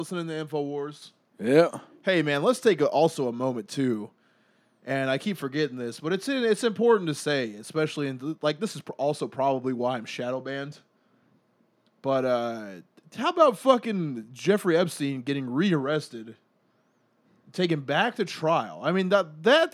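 At 1.02 s the microphone volume stepped up: the call software judged the input too quiet and raised the device's capture level in a single jump of about 6 dB instead of easing it up gradually. Because the gain is applied to everything the microphone picks up, the speech and the background noise behind it become louder together and at the same instant, an abrupt lift in level that stays in place afterwards.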